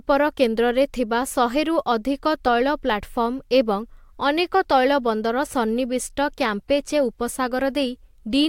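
No technical faults can be heard anywhere in this recording.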